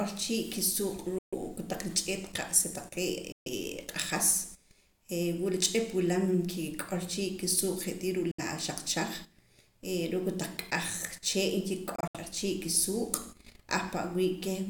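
Speech packets were likely dropped on their way to the headphones, a Bluetooth dropout, so the output falls silent at 1.18–1.34 s and 3.32–3.48 s, then briefly at 8.31–8.40 s. At 11.96–12.17 s it breaks into short holes, the longest about 70 ms. Each time the speech resumes further on, as if it had kept playing.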